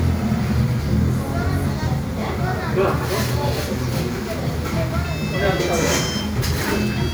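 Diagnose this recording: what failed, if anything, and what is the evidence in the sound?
Nothing failed; no fault is audible anywhere in this recording.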